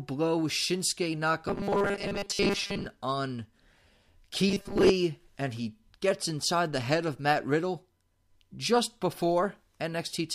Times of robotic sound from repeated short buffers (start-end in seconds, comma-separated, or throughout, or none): 1.48-2.86, 4.47-4.90